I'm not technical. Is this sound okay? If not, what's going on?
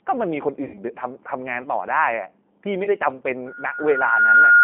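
No, it has three problems. The whole clip went through the G.729 codec, a low-rate internet phone format, so the speech sounds thin, phone-like and slightly robotic, with nothing above about 3.5 kHz.

There's also VoIP packet loss concealed by the speech codec. Chunks of audio went missing from 0.64 to 0.80 s and again briefly around 2.84 to 2.89 s, and the decoder papered over each gap with a stretched, fading smear.

Finally, a loudspeaker feedback squeal starts at 3.46 s and runs to the end. A mic is picking up its own speaker, so a whistle at about 1.4 kHz swells over roughly a second until it's much louder than the speech.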